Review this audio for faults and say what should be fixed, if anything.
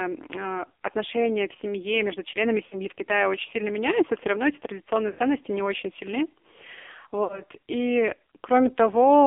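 The whole recording passes through an AMR narrowband mobile codec at heavy damage. The speech sounds buzzy and synthetic, which fits a low mode near 6 kbps. On a spectrogram, energy stops sharply above 3.5 kHz and thins below 300 Hz, and harmonics look smeared. Prevent this by sending the audio over a wideband or higher-rate link instead of a narrowband cellular path.

Lost AMR speech frames occur three times. The first is at 2.66–2.77 s, after "в семье между членами". The second is at 5.10–5.20 s, between "все равно эти традиционные" and "не очень сильны". The third is at 7.24–7.42 s. Each gap is 60 to 80 ms, which fits a run of three or four 20 ms frames. The decoder repeats the previous pitch and spectral shape with falling gain, so the sound stretches and fades. On the waveform this shows as a tapering envelope. On the spectrogram it shows as frozen, blurred harmonics, followed by a weak restart. 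Prevent this by improving radio link quality or adding error protection and retransmission so frames arrive intact.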